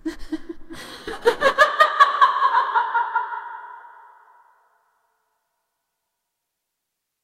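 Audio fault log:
0.76–1.01 s, loose connector crackle: there's a quick, ragged burst of scratching and crackle lasting about a quarter of a second. That's the classic sound of a worn or grubby contact shifting in its socket, so the connection keeps making and breaking in rapid, uneven bursts. Each break chops the signal, and any DC sitting on the line turns those interruptions into little pops, which is why it comes across as irregular crackle rather than a clean dropout.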